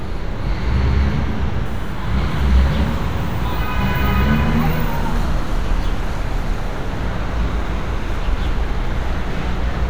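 From 1.65 s to 5.25 s, a USB whine sits under the sound. It is a fixed 1 kHz tone, loudest at 3 kHz. The bus pulls current every 1 ms, and that pulse leaks in through power or ground. It stays faint, roughly 35 dB down.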